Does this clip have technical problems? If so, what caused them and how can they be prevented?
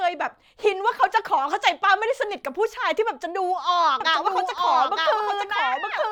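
Yes. A doubled audio track runs from 4.01 s to the end: a second full-band copy of the speech, about 5 dB quieter and trailing by roughly one second, cuts in abruptly with no decay or room colour. It is likely a second capture path or an edit layering two offset copies. Prevent it by routing each source once and muting duplicate inputs or stray overlapping regions before export.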